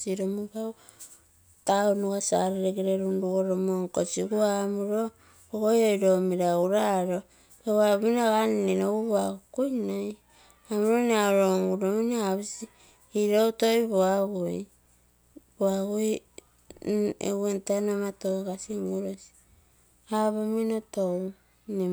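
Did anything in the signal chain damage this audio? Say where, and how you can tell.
Yes. From 6.91 s to the end of the speech, a steady, raspy mains buzz sits faint underneath, roughly 40 dB below the voice. It comes from the analogue wiring: sharp spikes twice per 60 Hz cycle from a dimmer, rectifier or poor shielding, spraying harmonics into the kilohertz range.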